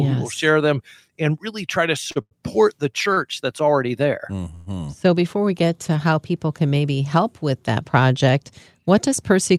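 Short stalls from a late packet come at 2.11 to 2.18 s and 2.22 to 2.33 s, both just after "and really try to", and again at 3.13 to 3.19 s. Each time a packet missed its slot, the jitter buffer ran dry, and the receiver held the last sound for 42 ms, 95 ms and 37 ms until the data turned up. Playback then resumed where it left off, so nothing is lost, but the speech briefly drags with a faint buzz or dip.

A call audio freeze follows at 4.55 to 4.68 s, right after "that's already there". The last sound is drawn out as a fading buzz or hiss for 117 ms rather than dropping to silence, and then speech picks up exactly where it stopped, pushed later by that amount with nothing skipped. This points to packets that were likely held up in transit long enough to empty the jitter buffer.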